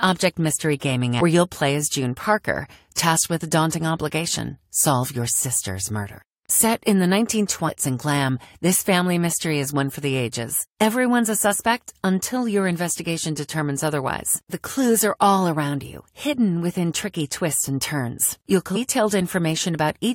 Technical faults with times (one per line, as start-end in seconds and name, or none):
1.20 damaged data in a compressed stream
7.67-7.69 damaged data in a compressed stream
18.75 damaged data in a compressed stream